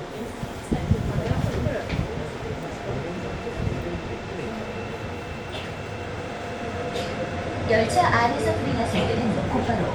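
No technical faults can be heard.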